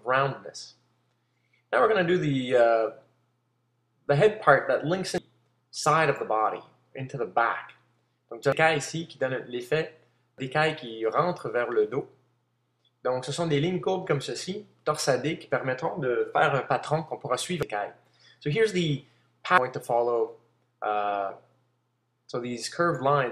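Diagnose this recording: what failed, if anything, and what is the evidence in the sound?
The compressed stream failed: damaged data in a compressed stream corrupted a few frames, so at each bad spot the decoder misread or rejected what it received, lost frame sync and had to hunt for the next valid header before resuming. Each event is a brief chirp, squawk, click or short hole in the sound, heard at 5.18, 8.52, 10.38, 17.63 and 19.58 s. They are isolated, momentary disruptions rather than a sustained degradation, which points to the codec or storage stage rather than to the analogue path.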